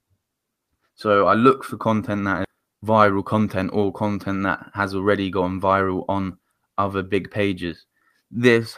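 In this speech clip, at 2.44 s about a third of a second of audio was dropped, either on the way or by an overflowing jitter buffer, while later speech was already waiting. The result is a skip ahead: playback leaps forward with no filling gap, joining the two sides almost seamlessly and dropping a chunk of speech. From 3.11 to 3.65 s a jitter buffer speed-up follows, as the receiver still held more audio than its target and repeatedly cut out short pitch-period pieces, around 50 ms in total. That plays the speech at 109% speed with unchanged pitch, so this stretch sounds rushed.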